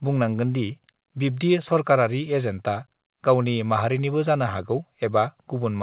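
No technical faults can be heard in this speech.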